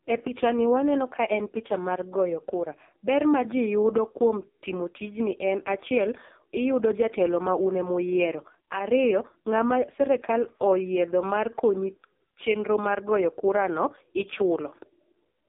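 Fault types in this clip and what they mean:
AMR narrowband mobile codec: the speech runs through a 2G/3G phone coder at what sounds like its lowest 4.75 kbps mode, so it comes out heavily buzzy and synthetic. A spectrogram shows energy only between about 250 Hz and 3.6 kHz, empty above, with smeared, blocky harmonics.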